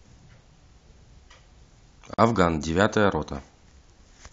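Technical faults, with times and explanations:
2.14 to 2.18 s: gap at a join of encoded pieces. The speech drops out for about 44 ms, then resumes where it stopped. Two separately encoded pieces were joined untrimmed, leaving encoder start delay and end padding as silence. The codec smears its abrupt edges.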